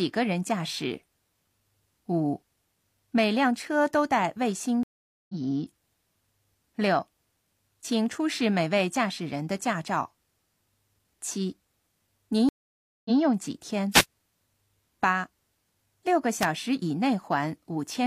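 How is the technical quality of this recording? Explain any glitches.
The recording has two kinds of faults: two stream reconnects and two brief wireless microphone noise hits.

Stream reconnect, at 4.83–5.35 s and 12.49–13.19 s: the connection dropped and a fresh decoder started mid-stream, leaving gaps of 0.46 s and 0.56 s. The first resumes roughly four tenths of a second later. The second restarts 0.14 s earlier, repeating audio.

Wireless microphone noise hit, at 13.91–14.05 s and 16.40–16.45 s: the FM radio signal faded as reflections cancelled, so receiver noise rose into short bursts of static swish over the speech.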